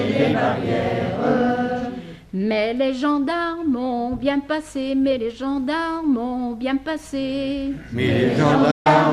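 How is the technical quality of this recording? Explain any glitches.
There is one glitch near the end. At 8.71 to 8.87 s a digital broadcast dropout occurs: failed frames mute the receiver, so sound fades out within about 8 ms, leaving a flat-line waveform gap and a blank vertical spectrogram band. The gap is about 0.14 s of lost audio, which fits roughly six dropped frames.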